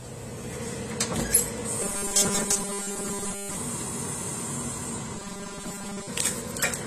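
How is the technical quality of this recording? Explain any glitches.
The technical quality is poor. Two kinds of fault are audible.

Throughout, the sound is dull and smeared, with nothing above 14.1 kHz and a plainly audible fizzy, warbling texture. This is likely AAC compression at a low bitrate, around 32 kbps. The encoder cuts the high frequencies and coarsely quantises what remains.

From 1.82 to 3.56 s and again from 5.16 to 6.07 s, there is robotic sound from repeated short buffers. The audio turns into a rigid, metallic buzz at 200 Hz. New audio likely arrived too seldom, so short chunks were replayed in place of most of the real signal. That pitch fits a buffer about 5 ms long.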